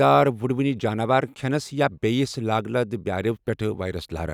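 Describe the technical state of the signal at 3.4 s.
At 3.4 s the speech signal is intact, with no dropout, clipping, glitch or other technical fault to be heard.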